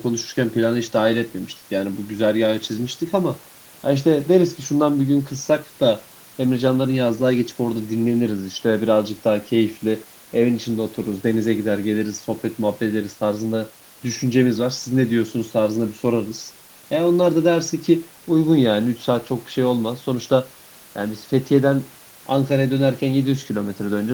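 No faults found anywhere in the recording.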